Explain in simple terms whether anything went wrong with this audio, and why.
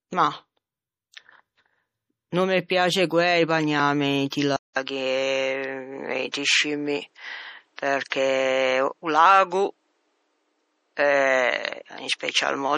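Yes, a few things went wrong. The sound was most likely squeezed hard with MP3 compression, which throws away detail and cuts everything above about 15 kHz, so the speech sounds watery and swirly throughout.

Pre-echo occurs at 4.30 s, 4.73 s and 6.32 s. The encoder smeared its noise across a short block, so a brief hiss comes just before a sharp sound.

At 4.56 s the recording most likely switched its input to a poorer device. After a short gap of about 0.2 s, the sound turns duller, losing everything above about 9.6 kHz, while the loudness stays about the same.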